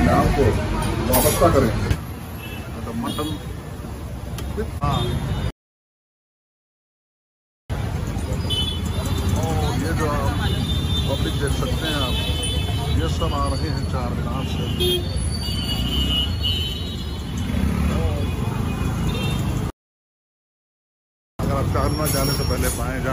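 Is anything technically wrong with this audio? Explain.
Yes. Two rebuffering stalls occur, at 5.51 to 7.70 s and 19.70 to 21.39 s. Playback exhausts its buffer, falls silent, then resumes exactly where it stopped, adding about 2.2 s and 1.7 s.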